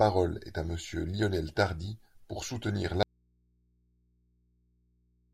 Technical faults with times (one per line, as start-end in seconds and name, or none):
3.03-5.33 audio dropout to a faint residue